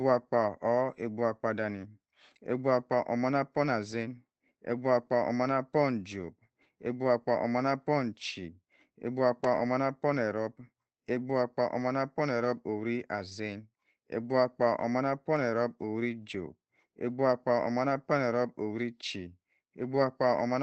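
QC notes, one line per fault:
The speech signal shows no faults, arriving through a call path whose audio band tops out near 8 kHz, which fits an Opus call codec running at around 24 kbps.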